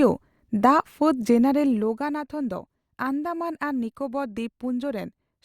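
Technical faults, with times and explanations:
Nothing technically wrong turns up anywhere in this bit of speech, so there's no fault to list here.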